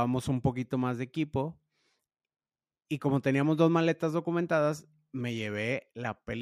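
Nothing stood out on listening to the speech in this recording.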